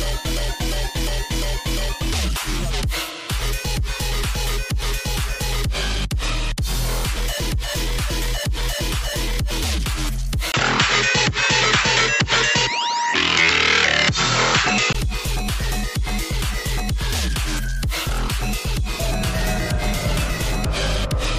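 At 10.52 s, after a 20 ms gap, the sound turns duller and boxier, with nothing above 7.7 kHz, a modest level shift and faint new background noise. It clears again at 14.95 s, likely because the input switched to a poorer device and back.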